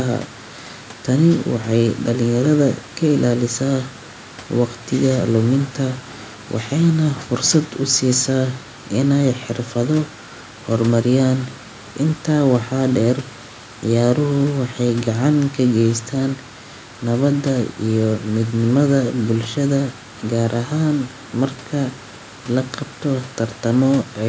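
Nothing's gone wrong in this bit of speech: it's just come through a call's microphone processing, which trims the deepest bass and leaves nothing above 8 kHz, with some room noise sitting about 27 dB below the talking.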